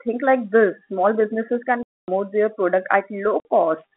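From 1.83 to 2.08 s, and again from 3.40 to 3.45 s, the speech drops out into dead silence, a clear case of packet loss filled with silence. The gaps are 250 ms and 50 ms, both whole multiples of 10 ms, which fits 10 ms packets going missing and the receiver inserting zeros. Each hole starts and stops with a hard edge, which sets it apart from concealment that would smear or repeat sound, or a gate that would fade out. The narrow telephone band of the G.711 line carries on unchanged on either side of both gaps.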